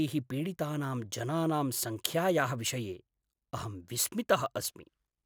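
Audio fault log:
Throughout, block size mismatch (truncated): each 10 ms block loses its tail, leaving a steady 100 Hz buzz, while the speech keeps normal speed and pitch.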